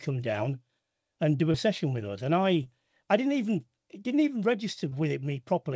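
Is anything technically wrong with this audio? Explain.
Yes. Three brief smears, at 1.52 to 1.56 s, 2.64 to 2.67 s and 4.89 to 4.93 s, are short concealed packet losses, each gap fitting one lost 20 ms packet that the receiver patched by extending the preceding sound before blending back. The audio is also band-limited, with nothing above 8 kHz, consistent with a wideband call codec such as G.722.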